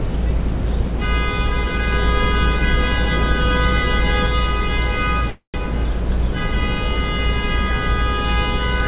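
Call audio freeze, 5.30 to 5.56 s: the sound smears into a fading buzz and then silence, likely from a drained jitter buffer. Playback then resumes 238 ms late with nothing lost, over a call line carrying nothing above 4 kHz.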